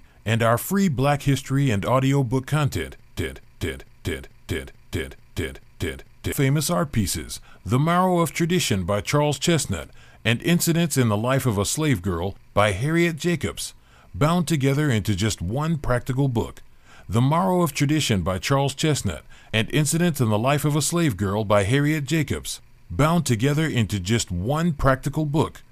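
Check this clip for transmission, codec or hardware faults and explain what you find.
One fault stands out, a broken-record loop in the speech. Just after "and audiobook content", from 3.19 s to 6.32 s, a fragment of about 0.44 s plays seven times back to back, an exact stutter with no variation, before normal speech returns at "famous art pieces". Whatever should have been heard in those three seconds is missing. The likely cause is a stall in the player, encoder or stream, which kept resending the last buffered piece until data flowed again.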